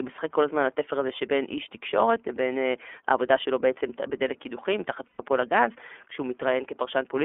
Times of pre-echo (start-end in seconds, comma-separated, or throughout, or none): none